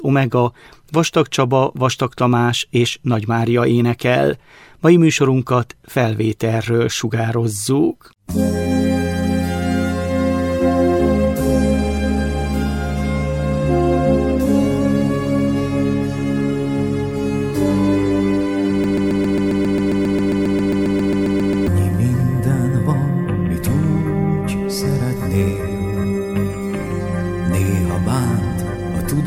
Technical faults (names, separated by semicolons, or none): broken-record loop